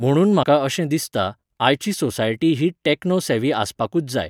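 A broken MP3 bit reservoir at 0.42 to 0.45 s, just before "अशें दिसता आयची सोसायटी", leaves a 24 ms glitch where the speech skips ahead. The likely cause is dropped frames: the next frame reached back for borrowed bits and decoded another frame's bytes instead.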